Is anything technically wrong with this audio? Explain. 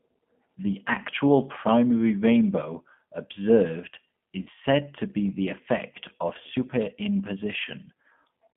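Yes, two faults are audible.

Throughout, the speech carries G.729 codec damage at 8 kbit/s. The decoder rebuilds each frame from a vocal tract filter, pitch predictor and a few pulses, so the speech sounds rough and synthetic. A spectrogram shows a band from 150 Hz to 3.4 kHz with nothing above.

From 4.42 to 4.49 s, just after "actual primary rainbow observed" and before "said to be the", there is VoIP packet loss concealed by the speech codec. About 40 ms is missing, which fits two lost 20 ms packets. The decoder repeated its last pitch and filter at falling gain, stretching the last sound as it faded. On a spectrogram this appears as smeared, stretched sound, and the waveform shows a dip in amplitude before the speech recovers.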